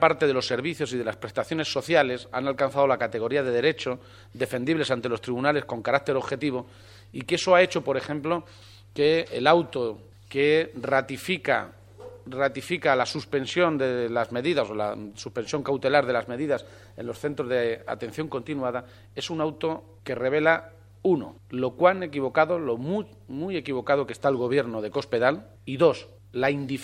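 No technical faults are audible.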